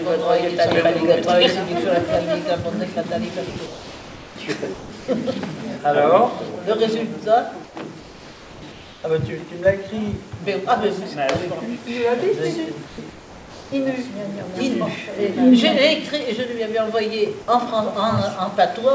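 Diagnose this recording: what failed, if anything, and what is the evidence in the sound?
Sound dropped by the voice detector at 3.50 s: about 60 ms of sound gives way to steady noise as the sender likely stops transmitting mid-sound.

Comfort noise in place of the background at 3.50–4.36 s, 7.64–9.04 s and 12.88–13.72 s: the real background turns flat and featureless. It is likely synthetic fill generated while transmission pauses.

Sound chopped by the voice detector at 4.74–5.08 s: the sound cuts in and out as sending likely switches on and off. The fill sits within the G.722 band that stops at 8 kHz.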